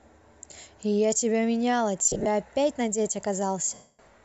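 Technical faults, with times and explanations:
2.06–2.27 s and 3.74–3.99 s, lost LE Audio frames: the first span loses about 150 ms in short bursts, the longest about 40 ms. The second is one 250 ms gap. The decoder repeats the last spectrum with randomised signs and fades it, so the sound smears into noise and decays.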